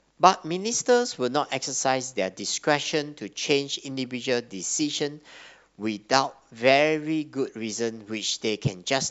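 Speech recording with no audible technical faults.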